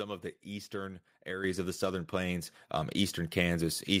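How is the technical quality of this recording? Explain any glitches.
The recording has two sudden level jumps caused by microphone volume being stepped up. At 1.44 s and again at 2.46 s, the call software judged the input too quiet and raised the microphone's input volume in single steps, first by about 7 dB, then about 4 dB. Speech and background noise jump louder together.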